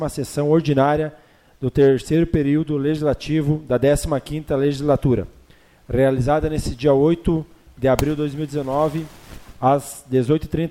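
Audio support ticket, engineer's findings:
No faults found: no dropouts, glitches or level problems audible anywhere in the clip, nothing to action.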